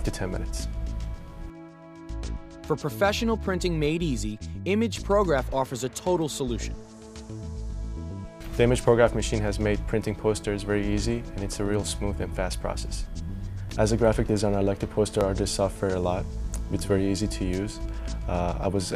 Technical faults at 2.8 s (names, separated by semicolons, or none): none